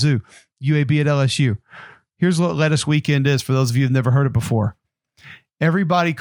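From 2.96 s, just after "what lettuce", and running to the end, there is imaging from linear upsampling: the sample rate appears to have been raised by straight-line interpolation, consistent with a doubling from 24 kHz to 48 kHz, and that interpolation filters poorly. Mirror copies of the speech spectrum survive between 12 kHz and 24 kHz, roughly 35 dB below the signal, while the top of the original band is dulled, giving sibilants a faint metallic shimmer.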